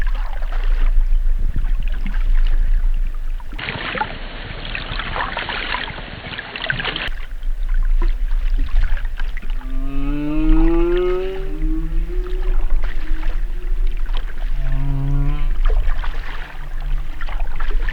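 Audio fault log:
3.59–7.08 s: input switched to a poorer device. For this stretch the sound loses its top end abruptly, with nothing above 4.4 kHz, so it turns dull and boxy, then opens up again at 7.08 s. There is no gap at either switch and no obvious jump in level, but a faint new background noise sits roughly 45 dB under the signal. The likely cause is the recording path briefly moving to a narrower-band microphone or headset profile with its own noise floor.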